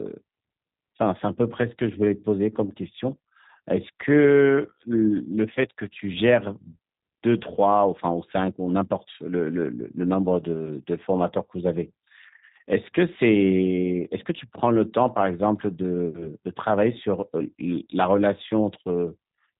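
Throughout, the speech carries G.729 codec damage. Nothing passes above 3.8 kHz, so it sounds narrow and dull. The voice is rebuilt from a vocal tract filter and sparse pulses, which fits an 8 kbit/s codec. It sounds plainly rough and synthetic.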